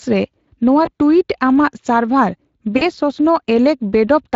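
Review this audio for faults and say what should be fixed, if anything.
Speex codec damage runs through the whole speech clip: a grainy, hoarse texture from an excitation that is short of bits, consistent with a middle Speex setting near 20 kbps. On a spectrogram, harmonics look smeared and any band above 8 kHz shows diffuse noise rather than clean structure. Encoding at a higher quality setting, or with a more modern codec, would prevent this.

VoIP packet loss concealed by the speech codec occurs at 0.85–0.90 s, after "ᱨᱮ ᱱᱚᱣᱟ" and before "ᱴᱩᱭᱤᱴ ᱟᱢᱟᱜ ᱥᱟᱨᱵᱷᱟᱨ", and again at 2.77–2.90 s, after "ᱱᱚᱣᱟ ᱴᱩᱭᱤᱴ ᱟᱢᱟᱜ ᱥᱟᱨᱵᱷᱟᱨ". About 20 ms and then about 40 ms of audio were lost, which points to one and then two dropped frames. The decoder repeats its last pitch and filter with falling gain, producing a brief stretch of buzzy tone or coloured noise that fades. On a waveform this appears as a decaying segment, and on a spectrogram as frozen, flattened harmonics that stay weak briefly after the gap. 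Forward error correction or a steadier network path would prevent this.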